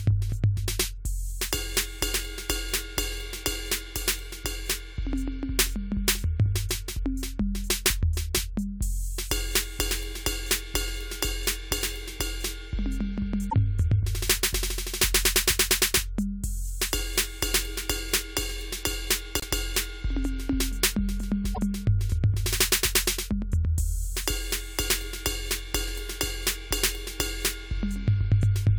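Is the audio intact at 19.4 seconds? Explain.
No. From 19.40 to 19.44 s, the music breaks for about 40 ms. It jumps ahead, and the sound right after the jump comes out damaged instead of clean. The likely cause is a broken MP3 bit reservoir. MP3 frames can store part of their data in space left over in earlier frames. If frames are lost, the next frame reaches back and reads the wrong bytes. The span fits one or two frames of about 26 ms each.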